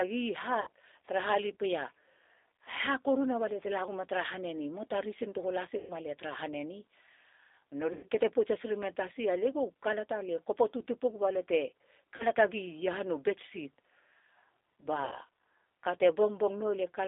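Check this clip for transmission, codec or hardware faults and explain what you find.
Two faults are present: codec damage across the whole speech clip, and five short packet-loss gaps that the decoder papered over.

G.729 codec, throughout: the speech is confined to roughly 300 Hz to 3.7 kHz and has a rough, slightly synthetic grain, which fits an 8 kbit/s G.729 stream. The decoder rebuilds each 10 ms frame from a vocal-tract filter, a pitch predictor and a few pulses. That modelling roughness, not just the narrow band, is what separates it from a plain telephone band-limit.

VoIP packet loss concealed by the speech codec, at 0.61–0.68 s, 5.78–5.93 s, 7.93–8.05 s, 12.16–12.26 s and 15.05–15.15 s, lasting 40 to 120 ms: the decoder extended its last pitch and filter with falling gain. The speech smears into a buzzy tone or coloured noise that fades rather than going silent, as a true dropout would, and stays weak briefly afterward.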